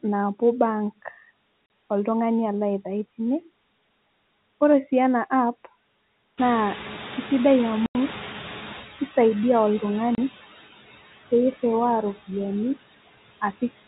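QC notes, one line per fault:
throughout: noise suppressor artifacts. The suppressor pulls down every band it judges to be steady noise, cutting the background by about 15 dB. The residue sinks in the gaps between phrases and swells back up under the speech. The band-limited, narrowband sound of the G.711 A-law telephone path sits under all of this.
1.66–1.70 s, 7.86–7.95 s, 10.15–10.18 s: packet loss filled with silence. Three dropouts where the audio stops dead, lasting 40 ms, 90 ms and 30 ms. All three lengths are whole multiples of 10 ms, which points to 10 ms packets, with runs of several lost in a row. The receiver inserts pure silence instead of concealing the gap, so each hole has abrupt edges.
6.37–8.84 s: noise suppressor catching up. The room noise jumps up by about 17 dB at roughly 6.5 s and then sits about 14 dB below the speech. The suppressor's noise estimate trails the change, so the louder background leaks through with only about 9 dB of reduction at first. 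Over roughly 2.5 s, about 2470 ms, the estimate adapts and the noise gradually settles lower. The longest dropout at 7.86 s falls inside this stretch.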